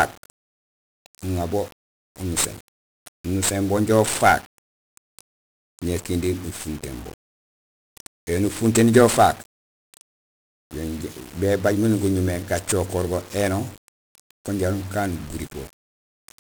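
Speech carrying 1-bit DFPWM compression throughout: broadband fuzzy crackle and hiss burying the treble, unlike ordinary hiss because the noise tracks the signal, consistent with heavy coding around 48 kbps.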